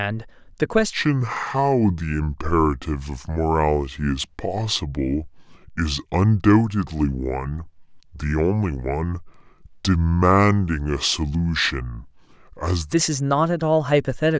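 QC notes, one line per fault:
0.93–12.93 s, wrong sample rate: speech runs at two-thirds speed and about 7 semitones low, fitting 24 kHz audio played at 16 kHz; pitch and tempo drop together.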